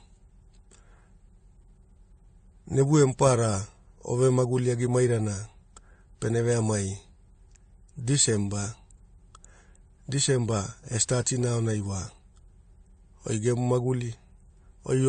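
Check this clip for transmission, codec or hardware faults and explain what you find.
One codec fault runs through the whole clip.

From start to finish there is transcoding between lossy codecs. A low-rate encode, consistent with 32 kbit/s AAC-LC, was likely re-encoded with something resembling WMA 1 at 96 kbit/s. The second codec spends bits preserving the first one's artefacts and adds its own, so both sets of artefacts are heard together, and the speech has nothing above 9 kHz.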